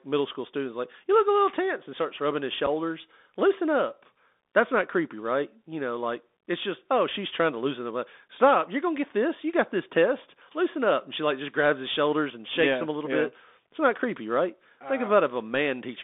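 A speech recording carried over a Bluetooth CVSD headset codec, whose one-bit delta coding at what sounds like 64 kbps confines the voice to roughly 250 Hz to 3.6 kHz, with a granular hiss and scratchy s sounds. At 2.66 s, unconcealed Bluetooth headset packet loss drops about a single packet, leaving a 7.5 ms abrupt hole, with the voice returning briefly quieter.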